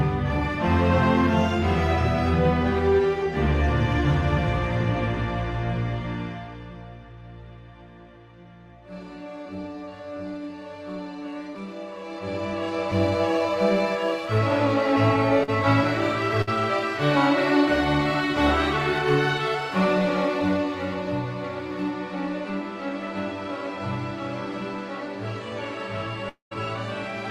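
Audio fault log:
15.43 to 15.50 s, short concealed packet loss: about 40 ms of the call never made it to the decoder in time, so the receiver papered over the hole by carrying the last sound forward for roughly 42 ms and then easing back into the real signal. What you hear is a quick smear or wobble, over almost before you notice it, and anything very brief that fell in that slot just isn't there.
16.42 to 16.49 s, burst of packet loss: a longer gap this time, about 60 ms of audio lost or arriving too late to play. The receiver stretched the last sound across about 54 ms, letting it sag in level as it went, so you get a held buzz or fading hiss instead of the real thing. Then the audio picks up again a little further on, with that slice simply skipped.
26.29 to 26.53 s, long network dropout: roughly 220 ms of audio goes missing, likely a stall in the network rather than anything at the source. 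The concealment first continues the last sound as a fading buzz or hiss, then gives up, leaving about 130 ms of silence or a low steady floor. When the signal returns, it's further along, and whatever was in that stretch is gone for good.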